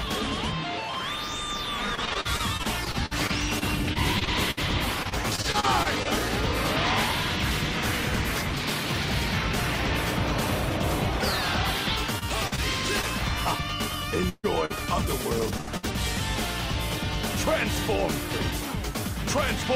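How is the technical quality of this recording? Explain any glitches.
The recording is impaired by network packet loss. There are two choppy stretches and a cluster of dropouts between about 14 and 16 seconds.

Repeated packet loss (robotic sound) runs from 1.95 to 6.07 s and again from 12.19 to 13.05 s. Packets went missing again and again. Each hole was patched by extending the last sound, and then the next hole arrived. About 14 percent of the first stretch and 12 percent of the second is filled-in sound. The gaps reach 59 ms and 42 ms. The result is choppy, with fragments missing.

A burst of packet loss hits at 14.29 to 14.45 s. About 140 ms never arrived. The receiver held the last sound and faded it, and roughly 30 ms drops to near silence. Two shorter bursts follow, at 15.61 to 15.69 s and 15.77 to 15.85 s, each about 60 ms. Each one sounds like a held buzz or a fading hiss, and then the audio jumps ahead with that part gone.

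Short concealed packet loss occurs at 14.65 to 14.72 s, where about 40 ms is missing. It occurs again at 15.58 to 15.61 s, where about 20 ms is missing, right before the second burst. The decoder bridged each hole by continuing the previous sound and then blended back into the real signal. Each one is heard as a brief smear or wobble. At 15.58 s it runs straight into the dropout that follows.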